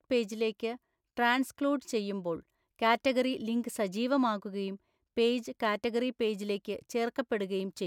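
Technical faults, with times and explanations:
Nothing stood out on listening to the speech in this recording.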